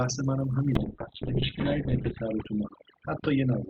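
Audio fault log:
throughout: overdone noise removal. The background is near silent with twinkling specks as weak bands are gated off, even where coding is clean.
0.76–3.70 s: call bitrate drop. Coding falls from 32 to 7 kbps, and the top end narrows from 20 kHz to 4 kHz. The audio turns rough and muffled from a definite onset, bottoming out for 1.36 s.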